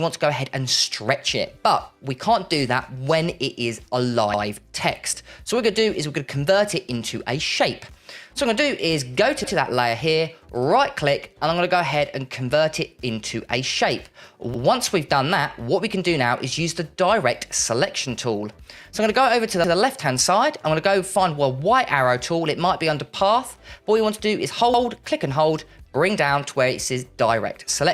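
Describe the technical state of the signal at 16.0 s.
At 16.0 s the signal is intact, with no audible fault at that moment.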